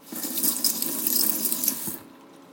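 From the first moment to the end, the clip suffers from a wrong sample rate. Everything runs about 2.76 times too fast and sits roughly 17.6 semitones higher, nearly an octave and a half, because the samples are being clocked out faster than they were captured, with no rate conversion. That ratio fits 16 kHz material played at 44.1 kHz. The sounds come across as chirpy, squeezed and hurried, with their timing compressed accordingly.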